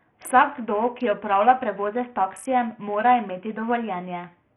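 Throughout the speech, treble flickers away and gritty noise clings to the sound. Likely Bluetooth SBC compression, its starved bit pool fitting roughly 48 kbps.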